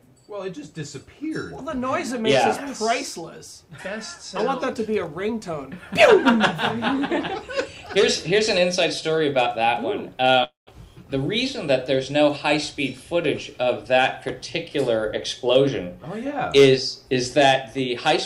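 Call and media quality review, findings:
Long network dropout, 10.43–10.69 s. Likely cause: packet stream interrupted, receiver concealing. Symptom: last sound smeared into a fading buzz, decaying to near-silence; about 0.24 s of audio never played; playback resumes past the gap, content missing.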